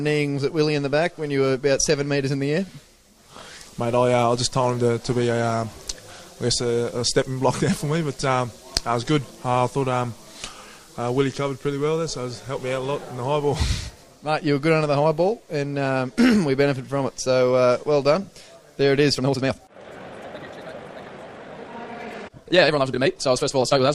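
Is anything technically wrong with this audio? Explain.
Yes. From 19.13 s to the end, the audio turns rushed at unchanged pitch, a time-stretched section, likely squeezed to about 1.9x speed by dropping short pieces.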